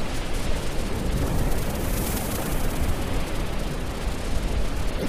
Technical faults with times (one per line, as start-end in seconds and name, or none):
4.95-5.06 damaged data in a compressed stream